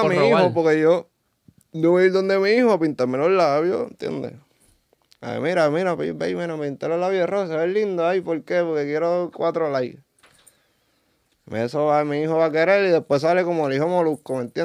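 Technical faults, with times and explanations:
No technical faults can be heard anywhere in the recording.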